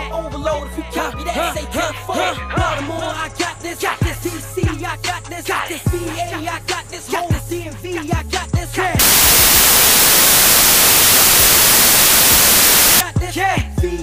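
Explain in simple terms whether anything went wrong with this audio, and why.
From 8.99 to 13.0 s, wrong sample width: 24-bit audio read as 16-bit becomes loud noise, slowed to two-thirds speed. A byte-order mix-up wouldn't change speed.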